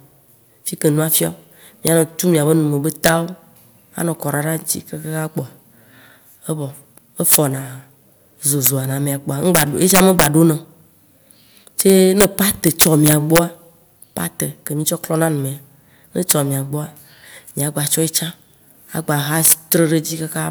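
Speech with integer overflow: loud peaks driven about 2 to 6 dB past the limit wrap to the opposite sign, producing violent cracks far harsher than clipping's flattened distortion, at 1.87, 3.04–3.09, 7.32–7.36, 8.66, 9.55–10.26, 11.81–13.39, 16.31 and 19.45–19.73 s.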